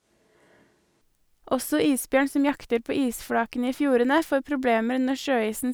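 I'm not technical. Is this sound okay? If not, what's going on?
No. From the very start until about 1.01 s, the speech sounds roomy and hollow, with thinner bass and some background room noise, then abruptly turns close and full. This is likely a switch to a distant microphone, with the close microphone missing for that opening stretch.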